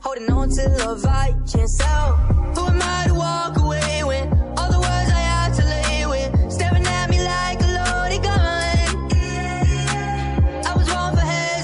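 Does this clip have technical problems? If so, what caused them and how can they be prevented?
No technical faults are audible.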